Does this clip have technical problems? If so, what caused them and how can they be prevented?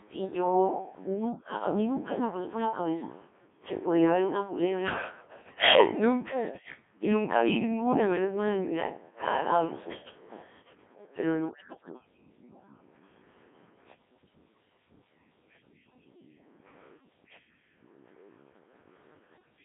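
Yes. The whole recording has passed through a Codec 2 vocoder. Instead of keeping the waveform, this codec transmits only pitch, voicing, energy and a coarse spectral envelope, and the decoder rebuilds speech from sine waves. Damage here is heavy: the sound is robotic and buzzy, squeezed into roughly 250 Hz to 3.6 kHz, and its thinness fits a very low mode near 1.3 kbit/s. Using a higher-rate mode or a waveform-preserving codec wherever the channel allows would prevent this.

Between 5.40 and 5.54 s, bit errors on the digital voice radio link corrupted the vocoder's data. The error rate was a few percent, and at such a low bitrate every flipped bit sets the pitch, level, voicing or spectral shape of an entire frame. For those 0.14 s, which fits a couple of frames, the synthetic speech jumps in pitch and tone and collapses into a warbling burst. Stronger forward error correction, or staying within solid coverage, would prevent it.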